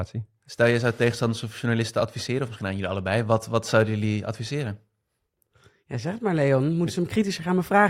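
Speech, and nothing in it is technically wrong.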